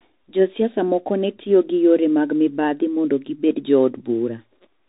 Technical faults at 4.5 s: Bluetooth CVSD headset codec

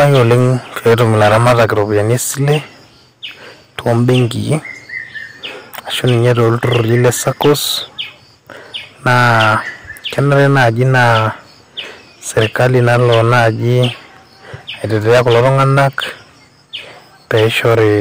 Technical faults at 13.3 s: hard clipping

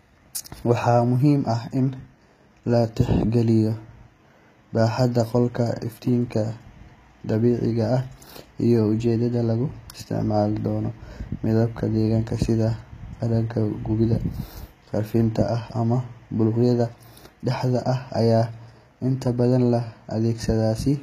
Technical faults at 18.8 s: HE-AAC compression

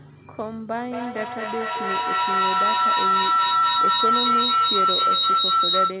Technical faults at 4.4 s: feedback howl

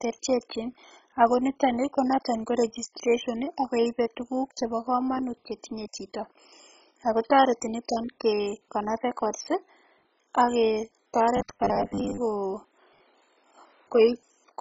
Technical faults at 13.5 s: MP2 compression

